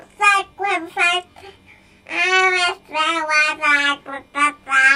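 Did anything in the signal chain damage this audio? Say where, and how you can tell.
Yes, channel delay (comb filtering) throughout, at the buffer stage. A channel lagging about 20 ms, summed to mono, carves evenly spaced notches from about 20 Hz. Unlike codec smearing, the notches never shift, and at this delay it sounds rough or slightly doubled.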